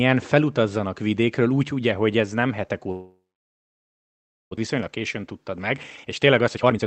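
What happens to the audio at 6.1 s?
At 6.1 s you're in the middle of a jitter buffer speed-up running from 4.67 to 6.85 s. The receiver keeps snipping out pitch-period-sized chunks to drain a backlog, so the speech plays at about 122% speed at unchanged pitch and sounds hurried, losing roughly half a second overall.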